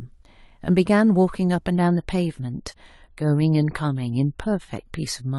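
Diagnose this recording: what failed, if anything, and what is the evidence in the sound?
Network stage, adaptive stream at a lower bitrate: from 1.74 s onward the speech suddenly gains codec artefacts with no gap, unlike rebuffering, which fits a switch from 96 to 32 kbit/s.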